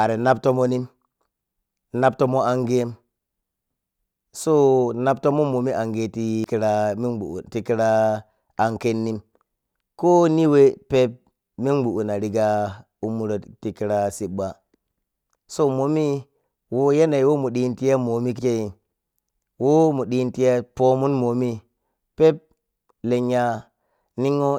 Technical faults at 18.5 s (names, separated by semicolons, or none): compressed frames skipped